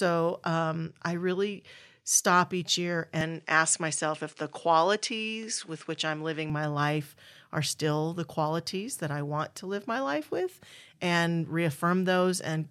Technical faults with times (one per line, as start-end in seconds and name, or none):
3.21-6.50 input switched to a poorer device